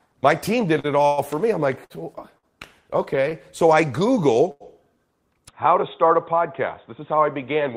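At 0.79 to 0.86 s, right after "team did", a sound is held too long, smeared for about 44 ms with a faint buzz or dip before "it all for me" continues. This is a short stall from a late packet: a packet arrived late, the jitter buffer ran dry, and the receiver stretched the last sound until it turned up, then carried on from the same point. Nothing is lost, but the timing slips.

At 1.06 to 1.20 s, after "team did it all", the sound stops moving and turns into a brief fading buzz or hiss lasting about 118 ms, with no dead silence, before "for me I'm like" resumes. This is a call audio freeze, likely from packets held up in transit. The receiver kept the last sound going until delivery resumed, so a gap was inserted while nothing was dropped.

The same short stall returns at 1.84 to 1.92 s, just after "for me I'm like", then at 2.38 to 2.45 s, 3.29 to 3.33 s and 4.51 to 4.62 s. Each time a sound hangs for roughly 20 to 90 ms, the longest near 4.5 s, as the buffer empties again.

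From 5.48 s to the end, the sound turns dull and boxy with nothing above 3.8 kHz, at much the same loudness and with a new, faint background noise. There is no silence at the change. This is an input switched to a poorer device, likely a narrower-band microphone or a headset's call profile taking over mid-recording.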